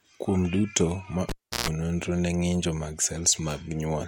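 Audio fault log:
1.29 to 1.69 s, cable pulled and plugged in: a live cable is pulled out of its socket and pushed back in, so the signal path opens with a pop and drops to near silence for about 0.34 s. As the plug goes back in, the bare tip touches first and picks up 60 Hz mains hum, heard as a buzz lasting about 0.14 s. A second pop follows as full contact is restored and the speech returns.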